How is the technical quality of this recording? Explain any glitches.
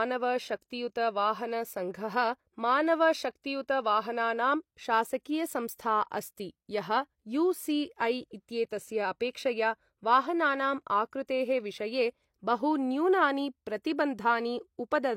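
Two brief pre-echo artefacts affect the speech, at 0.61 s and 8.69 s. A short hiss runs about 10 ms and 13 ms ahead of a sharp onset, softening it. This happens because the transform codec spreads quantisation noise meant for the loud attack across its whole block, including the quiet moment just before. Unlike a click or reverb tail, this noise comes before the attack, not on or after it.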